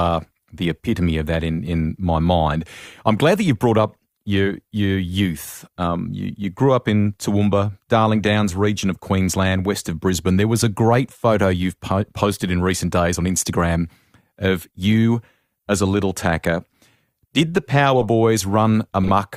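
At 12.01 to 12.05 s, just before "posted in recent days", then at 18.01 to 18.06 s after "did the", and at 19.04 to 19.10 s, a corrupt frame decoded produces short chirping blips. Flipped bits made the decoder rebuild a few frames each time with misread gains and codes, scattering energy at the wrong frequencies. They grow louder, from roughly -40 to -10 dBFS. Unlike a dropped packet's gap or concealment smear, these add sound.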